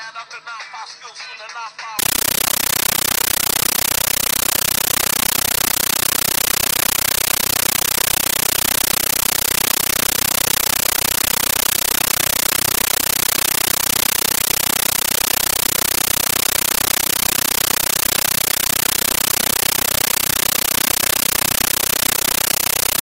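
From 1.99 s to the end, the audio turns into a compressed stream played as audio: an AC-3 (Dolby Digital) bitstream being treated as ordinary samples rather than decoded. Each frame arrives as a 13.3 ms burst of noise followed by silent padding, repeating 31.25 times a second, so the sound becomes a very loud, rhythmic chattering static. That steady frame-rate pulsing distinguishes it from random digital noise or clipping, which have no regular cadence.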